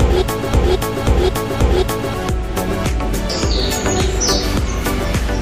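From the very start until 2.14 s, the clip is caught in a broken-record loop that is already under way when playback begins. A fragment of about 0.53 s repeats exactly, back to back, three times, so whatever should have played in that span is lost. This likely comes from a stalled player, encoder or stream resending the last piece it held. On a waveform and spectrogram, identical blocks tile side by side at 0.53 s intervals, with abrupt seams where each repeat restarts.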